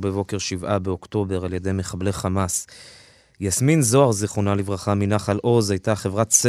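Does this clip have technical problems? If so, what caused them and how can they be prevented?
No, nothing technical goes wrong anywhere in this speech clip, so there's nothing here that needs fixing or preventing.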